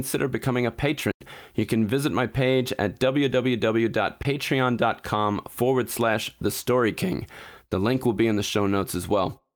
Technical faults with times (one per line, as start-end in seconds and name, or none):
1.11-1.21 block of digital silence
4.23-4.25 block of digital silence